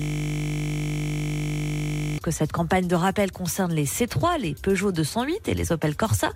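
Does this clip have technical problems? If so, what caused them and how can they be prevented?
Yes. A system hang loop is already under way when the clip opens and lasts until 2.18 s. One 20 ms slice of sound repeats over a hundred times, giving a steady 50 Hz buzz, because the hardware kept replaying its ring buffer while the host or driver froze. Prevent it by fixing the stall and having the driver mute output whenever the buffer stops being refilled.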